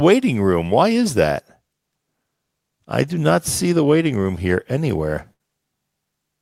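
At 5.33 s, just after "waiting room here anywhere", the speech briefly turns into a held, fading sound before snapping forward at 5.41 s with a small piece of the utterance gone. This is a burst of packet loss: several consecutive packets never arrived in time, so the receiver stretched the last sound it had for about 60 ms, lowering it as it went, then resumed later in the stream with about 60 ms of speech missing.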